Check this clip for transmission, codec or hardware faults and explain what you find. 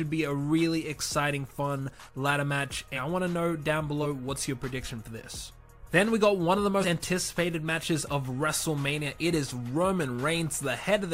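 Compressed frames were skipped three times, at 2.95 s, 4.02 s and 6.81 s. Whole frames were missing or rejected as damaged, so the audio jumps ahead. The jumps fit frames of about 46 ms, roughly three, one and two frames.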